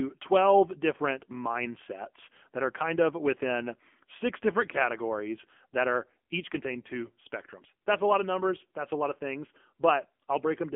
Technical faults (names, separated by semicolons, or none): AMR narrowband mobile codec